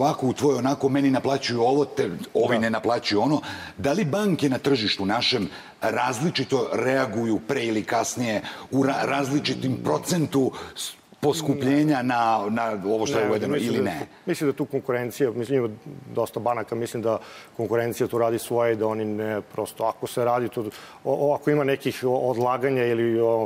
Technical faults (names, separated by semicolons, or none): none